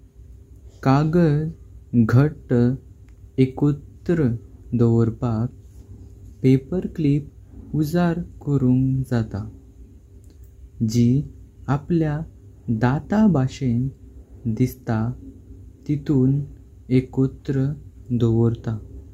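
No technical faults can be heard anywhere in the recording. There are no events to place on the timeline.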